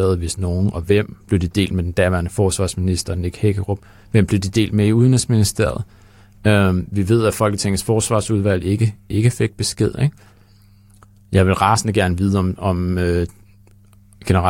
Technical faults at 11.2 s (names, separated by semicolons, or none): none